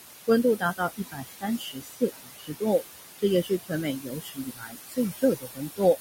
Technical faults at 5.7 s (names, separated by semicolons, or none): noise suppressor artifacts; speech cut by the noise suppressor